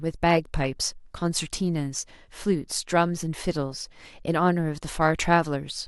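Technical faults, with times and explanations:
3.72–4.27 s, DAB burbling: bit errors slipping past error correction put short blips of noise into single sub-bands frame by frame, causing noisy blips rather than silent dropouts.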